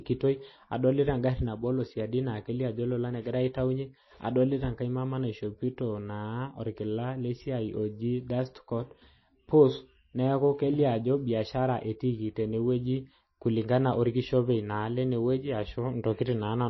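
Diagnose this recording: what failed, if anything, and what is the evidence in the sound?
Codec stage: likely starved MP3 compression, fitting about 24 kbps. Throughout, the speech has nothing above 5.8 kHz, and weak frequency lines flicker, sounding watery.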